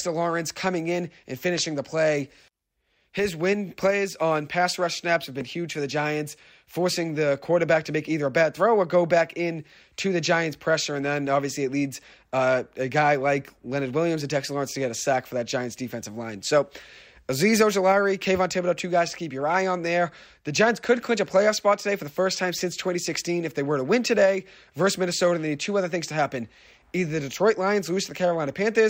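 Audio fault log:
No faults detected in this speech recording at any point.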